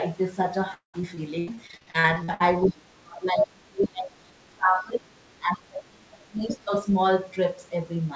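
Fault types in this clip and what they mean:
Repeated packet loss (robotic sound): From 0.74 to 2.42 s, successive dropouts up to 0.2 s long are patched by stretching preceding sound, giving choppy speech with missing pieces.
Other side's voice leaking through: Around 2.64 to 2.69 s a brief scrap of a second voice appears, about 20 dB below the talker, likely uncancelled loudspeaker echo reaching the microphone.
Speech suppressed in double talk: From 2.67 to 5.12 s and 5.39 to 6.43 s, the talker's level dips by up to about 30 dB, likely the echo canceller ducking during overlapping speech.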